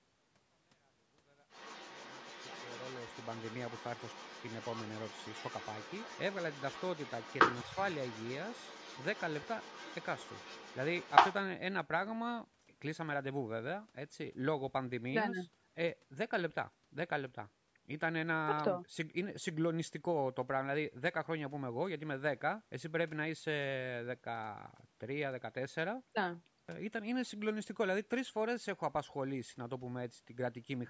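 From 1.49 s to 11.34 s there's the other side's voice leaking through, a second voice sitting well below the main talker, even under the smooth fade-in that finishes at 3.52 s. Likely the far end playing on the talker's loudspeaker and the echo canceller not fully cleaning it out.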